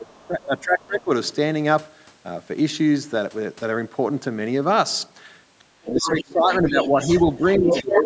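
Speech suppressed in double talk, 0.0 to 1.11 s: the talker's level dips by roughly 25 dB, likely because the echo canceller mistook overlapping talk for echo and turned everything down. The other side's voice leaking through appears faintly at 0.16 to 0.20 s and 5.59 to 5.64 s, far below the speech, likely residual loudspeaker echo the canceller missed. Suppression returns from 5.77 to 6.97 s, while leakage grows louder, at 5.89 to 6.23 s and then 6.53 to 8.04 s, nearly matching the talker. A further dip of around 15 dB runs from 7.58 s to the end.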